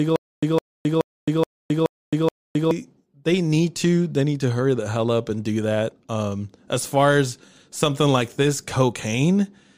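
From the start to 2.71 s, a stutter with silent gaps: a 159 ms burst repeats six times every 425 ms, separated by 266 ms of digital silence, likely from a stalled stream.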